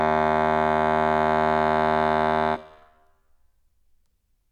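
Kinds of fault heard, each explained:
No kinds of fault are heard in this music, so there are none to explain.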